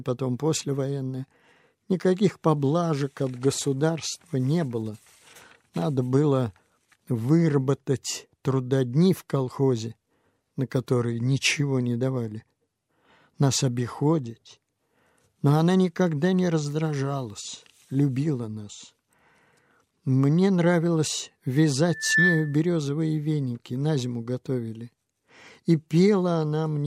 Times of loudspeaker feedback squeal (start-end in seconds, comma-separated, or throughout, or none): 21.90-22.60